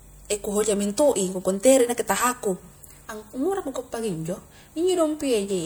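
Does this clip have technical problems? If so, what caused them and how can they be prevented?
Yes. At 3.57 to 3.61 s the speech has a brief glitch lasting about 40 ms. This is damaged data in a compressed stream. Corrupted bytes made the decoder misread frames and lose sync, then resume at the next frame header. Prevent it with checksummed, error-protected transfer and storage.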